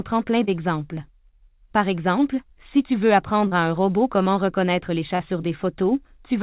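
Short concealed packet loss strikes three times in this speech, at 0.44 s, 3.47 s and 5.15 s, each a roughly 40 ms gap the receiver patched by stretching the preceding sound before blending back. Each is heard as a brief smear or wobble. On a spectrogram, already empty above 4 kHz as in a G.711 narrowband call, the patch shows harmonics flattened into a short repeated texture; the waveform shows a too-regular, copied-looking cycle.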